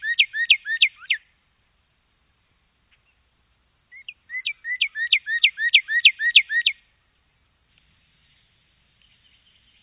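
Nothing to flag: no technical faults are audible anywhere in the recording.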